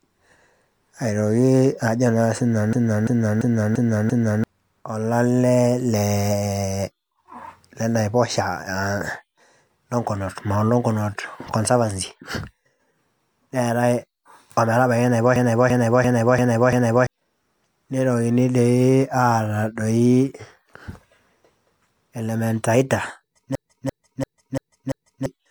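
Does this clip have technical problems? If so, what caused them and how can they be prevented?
Yes. Throughout, the speech sounds swirly, smeared and hollow, with softened consonant attacks. This is most likely generation loss: the audio was decoded and re-encoded as MP3 about three times, each pass adding fresh quantisation noise on a new frame grid. The sound points to around 96 kbit/s. To prevent it, keep an uncompressed master and encode only once, at the end.

A machine-gun stutter at 2.73–4.44 s, 15.36–17.07 s and 23.55–25.26 s is a system hang loop. The host froze while the sound hardware kept replaying the same ring buffer, so one 341 ms piece repeats five times at about 2.9 per second, which fits a 16384-sample buffer. Roughly 1.5 s of audio is lost each time. To prevent it, fix the driver or system stall, or give the audio thread real-time priority.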